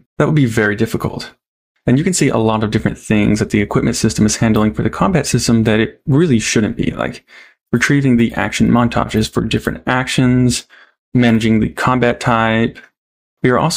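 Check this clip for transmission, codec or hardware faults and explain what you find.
Nothing in the clip points to a transmission, codec or hardware problem. No dropout, glitch or other disturbance can be heard anywhere in it.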